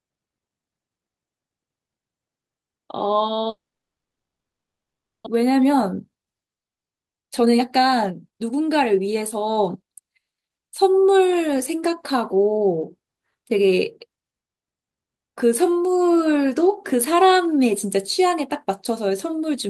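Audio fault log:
3.49 to 5.28 s, long network dropout: The sound stops, leaves a brief fading buzz, then nearly 1.7 s of silence. This is likely a dropout where packets stopped arriving. About a second of audio is never heard, and playback resumes later, roughly 0.7 s behind.
5.36 to 10.05 s, jitter buffer speed-up: The speech runs about 16% fast at unchanged pitch and sounds hurried. The receiver trims tiny pitch-period slices over and over, removing roughly 0.7 s. This clears the backlog left after the dropout.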